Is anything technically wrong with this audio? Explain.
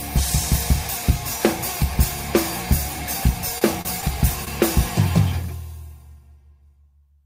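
Yes. Short stalls from late packets occur at 3.58–3.63, 3.81–3.87, 4.01–4.05 and 4.45–4.49 s. Each time the jitter buffer ran dry, so the last sound was held 18 to 35 ms, with a slight buzz or dip, before resuming with nothing lost.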